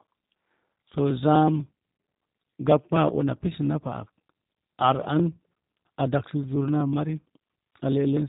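Speech coded throughout with the G.729 codec, which fits an 8 kbit/s stream: nothing above 4 kHz survives, and the voice is rebuilt from a filter, pitch predictor and sparse pulses, giving a plainly rough, synthetic edge rather than the smeared, swirly artefacts of a transform codec. At 7.36 s there is VoIP packet loss concealed by the speech codec, a gap of about 10 ms that fits one lost frame. The decoder extends the previous pitch and filter into a brief stretched sound that fades, and the voice stays weak for a moment afterward, unlike a clean dropout to silence or a click.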